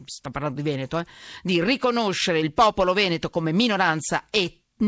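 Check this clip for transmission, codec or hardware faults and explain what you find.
Two related faults are present: clock drift between sender and receiver, and the repeated timing corrections it forces. The audio is band-limited with nothing above 8 kHz, which fits a G.722 call path at 64 kbps.

Clock drift between sender and receiver runs through the whole clip. The sending side's sample clock runs fast, by roughly 4 percent. Audio therefore arrives faster than the receiver plays it out, and the jitter buffer keeps gaining depth. Left alone, the buffer would overflow and latency would grow, so the receiver has to discard material continuously to hold its level.

Repeated timing corrections occur from 0.20 s to 4.83 s, effectively the whole speech passage. The receiver removes short pieces of audio to keep pace with a sender running at 104 percent, and every edit is a cut. The cuts are small and unevenly spaced. 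If heard at all, they come across as faint hiccups and a slightly hurried, uneven tempo in the speech rather than as distinct dropouts.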